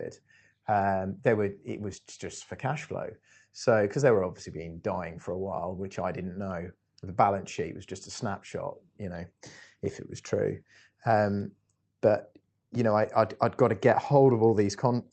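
No audible technical faults.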